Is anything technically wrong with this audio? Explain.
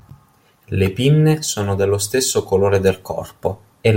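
No, nothing technically wrong is audible anywhere in this speech recording.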